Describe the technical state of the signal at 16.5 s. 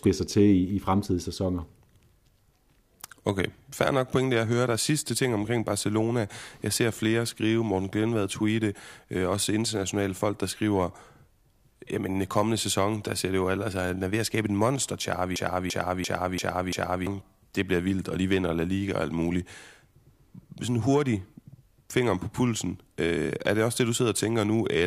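A system hang loop runs from 15.36 to 17.07 s, so 16.5 s falls inside it. After "at skabe et monster", the playback path stalled while the audio hardware kept replaying its ring buffer: one 341 ms slice repeats exactly five times, which fits a 16384-sample buffer. It sounds like a rhythmic stutter at about 2.9 Hz, and roughly one and a half seconds of real audio is lost before "det bliver vildt og" resumes.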